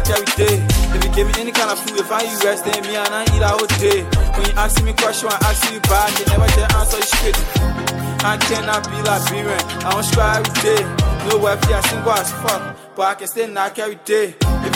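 No dropouts, clicks, distortion or level jumps turn up anywhere in the sound, and nothing needs attention.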